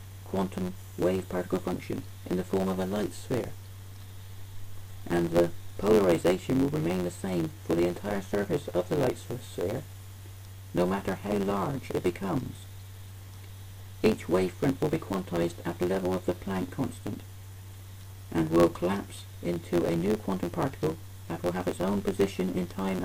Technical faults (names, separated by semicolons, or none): block size mismatch (truncated)